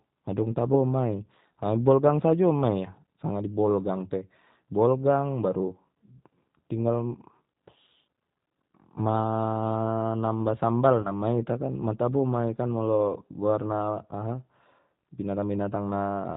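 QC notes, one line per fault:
Throughout: G.729 codec. Nothing above 4 kHz survives, and the speech sounds rough and slightly synthetic. The sound is rebuilt from a vocal tract filter and a few pulses per frame. The damage is plainly audible, which fits an 8 kbit/s G.729A stream.
11.02 to 11.11 s: VoIP packet loss concealed by the speech codec. About 30 ms of audio went missing, which points to a single lost packet. The decoder stretched its last pitch and filter into a fading buzzy tone or coloured noise. The speech stays weak or distorted briefly after the gap, into "ma ita kan ma".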